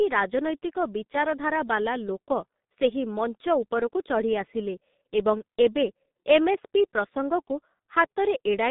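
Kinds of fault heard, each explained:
G.723.1 codec: The speech is heavily coded, with nothing above 3.8 kHz and a narrow 150 Hz to 3.7 kHz line band. It sounds muffled and hoarse, with smeared consonants, which fits a rate near 6.3 kbit/s. A plain telephone filter would narrow the band without adding that hoarse graininess.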